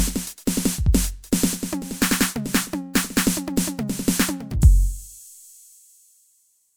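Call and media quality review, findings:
No faults found in this music clip; nothing audible to attribute to any component.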